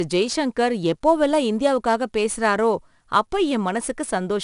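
A gritty hiss rides on top of the speech from start to finish, rising and falling with the level of each syllable, and the top end is dull, with nothing above about 10.6 kHz. This is 4-bit ADPCM compression. Each sample is stored as a coarse 4-bit step from a predicted value, and the resulting error tracks the signal. The rate points to roughly 88 kbps, which fits a sample rate near 22 kHz.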